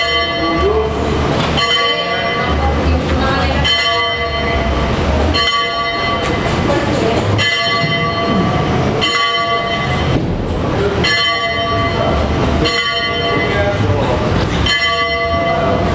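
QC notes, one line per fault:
Throughout: gain pumping. The gain swings by about 15 dB. Loud and quiet parts sit unnaturally close in level, so the sound feels squashed. The likely cause is input gain set far too high, with a fast limiter or compressor clamping down on each peak and releasing in the pauses. The call's microphone processing is audible too, with nothing above 8 kHz.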